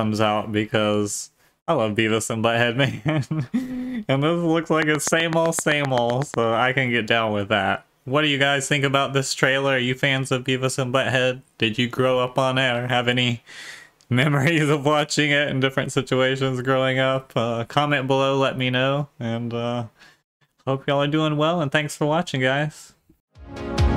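From 4.82 s to 6.35 s a regular ticking rides over the sound: a train of clicks, about fifteen of them at a steady 7.9 per second, each with much the same sharp shape and standing well above the surrounding level, by roughly 15 dB. Because they arrive like clockwork and ignore what the audio is doing, the cause is likely a repeating electrical pulse, from interference by nearby equipment or a faulty connection or power supply.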